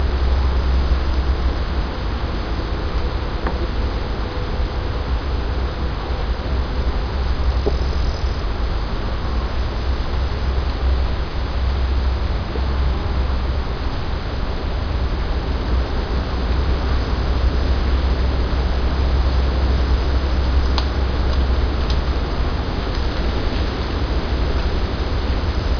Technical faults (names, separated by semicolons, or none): none